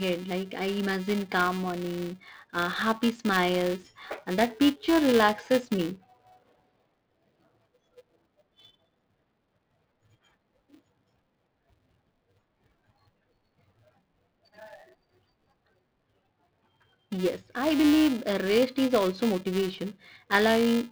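Throughout the speech, a buzz at 375 Hz rides on the signal, the sign of a filter restarted on every block. The filter drops its memory at each block boundary and starts again from silence, so every block opens with a small transient; the rate fits 128-sample blocks. The buzz swells with louder passages and fades in quieter ones. A spectrogram shows harmonic lines at 375 Hz multiples tracking the level, and the waveform shows evenly spaced ticks at each boundary.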